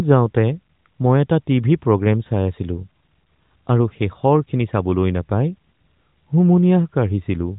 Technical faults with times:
none

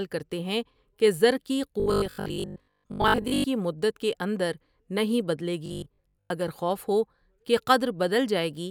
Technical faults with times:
1.80-3.46 robotic sound from repeated short buffers
5.66-6.30 robotic sound from repeated short buffers

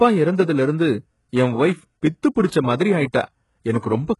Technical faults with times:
0.00-4.20 HE-AAC compression

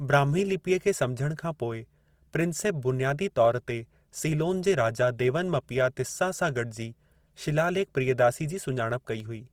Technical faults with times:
0.00-9.53 Opus compression

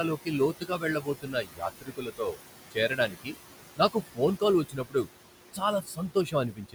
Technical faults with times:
0.00-6.74 noise suppressor artifacts
0.17-2.38 speech cut by the noise suppressor
2.71-3.35 speech cut by the noise suppressor
3.76-5.08 speech cut by the noise suppressor
5.53-6.74 speech cut by the noise suppressor

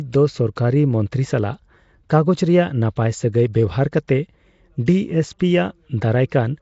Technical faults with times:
0.00-6.62 Nellymoser compression

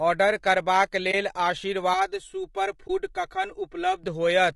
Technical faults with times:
0.00-4.55 low-delay AAC compression
1.11-1.14 AAC frame loss with muting
1.94-4.04 channel delay (comb filtering)
2.87-2.90 AAC frame loss with muting

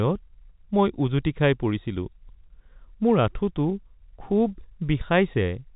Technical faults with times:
none

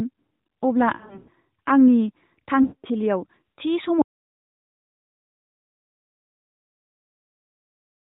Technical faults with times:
0.96-1.30 lost AMR speech frames
2.62-2.86 lost AMR speech frames
4.02-8.10 audio dropout to silence

